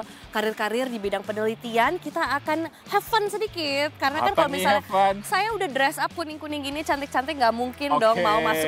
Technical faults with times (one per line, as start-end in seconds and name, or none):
6.22-6.50 sudden gain jump